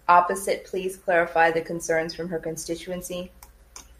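No technical faults can be heard anywhere in the speech recording, and the signal stays intact and continuous throughout.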